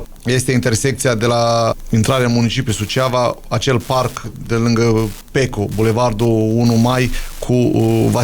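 Wi-Fi interference runs under the whole clip. A Wi-Fi radio sits close enough to the audio circuitry that its transmissions get rectified and land in the signal. What you hear is a steady ticking at just under ten per second, locked to the radio's beacon, which repeats every 102.4 ms. It sits roughly 25 dB below the programme, so it's quiet.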